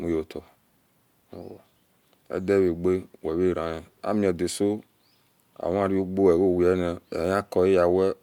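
No faults detected anywhere in the speech recording.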